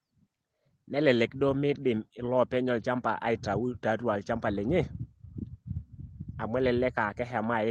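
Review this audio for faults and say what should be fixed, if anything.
Nothing needs fixing; no faults can be heard.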